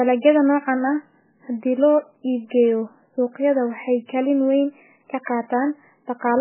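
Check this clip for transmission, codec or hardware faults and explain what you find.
One fault runs through the entire speech clip: likely MP3 compression at a very low bitrate, which sounds like roughly 8 kbps. Starved of bits, the encoder discards everything above 3 kHz and switches weak frequency lines on and off between frames, so the speech sounds heavily muffled, watery and swirly, with smeared attacks.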